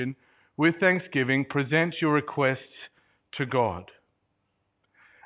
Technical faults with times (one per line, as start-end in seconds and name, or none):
none